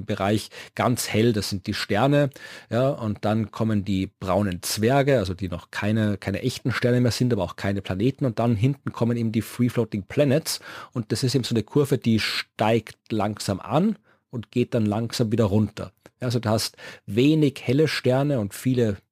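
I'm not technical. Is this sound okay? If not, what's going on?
No. There is crude rate conversion running through the whole recording, from start to finish. The audio's sample rate was changed by simply dropping or repeating individual samples instead of smoothing them properly. The pattern fits a conversion from 48 kHz down to 44.1 kHz. Those small jumps add faint, out-of-tune tones that have nothing to do with the speech, heard as a gritty fizz that rides along with louder and brighter sounds.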